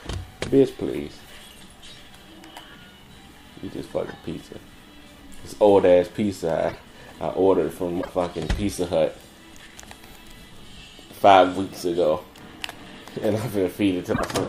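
At 6.68–6.76 s, 8.01–8.09 s and 14.12–14.22 s the sound jumps ahead and a short chirp, burst of noise or hole follows, spanning about three 26 ms frames. The likely cause is a broken MP3 bit reservoir, where frames after a cut read another frame's bytes. On a spectrogram each event is a sudden break. On the waveform it is a jagged break.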